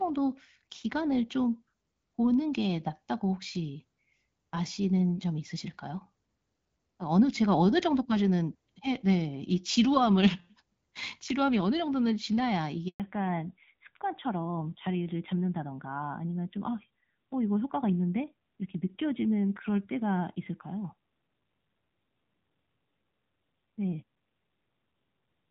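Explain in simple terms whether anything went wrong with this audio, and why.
At 12.88 seconds the speech cuts out for about a tenth of a second (120 ms) and comes back at 13.00 seconds. This is a handover gap: the phone switched the call from one network connection to another, and while it moved over, no pieces of speech got through. The sound fades almost instantly, stays silent until the new connection takes over, and whatever was said in that moment is gone.

From 13.00 seconds to the end, the speech sounds duller, flatter and rougher. The crisp, airy detail is missing. This is a fallback to narrowband. Before that point the call used HD Voice, which carries a wide range of sound and, in the first half, adds only light coding damage. After the switch, the call dropped to an older, more basic phone codec that throws away everything above 4 kHz.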